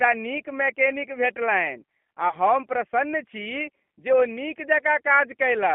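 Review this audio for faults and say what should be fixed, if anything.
The whole clip carries G.729 codec coloration: speech is squeezed into a 200 Hz to 3.4 kHz line band and rebuilt at 8 kbit/s from a vocal tract filter and sparse pulses, giving a plainly rough, synthetic texture with nothing above 3.4 kHz. To prevent it, carry the call on a wideband codec such as G.722 or Opus instead of G.729.

From 2.29 to 2.37 s, just before "हम प्रसन्न छी", there is VoIP packet loss concealed by the speech codec. About 30 ms of audio is missing, which points to a single lost packet. The decoder filled the gap by repeating its last pitch and filter at falling gain, so the sound is briefly stretched into a buzzy tone or coloured noise that fades. Because each frame builds on the one before, the voice stays weak or distorted for tens of milliseconds past the gap. To prevent it, reduce network loss with QoS prioritisation or add forward error correction or redundancy to the stream.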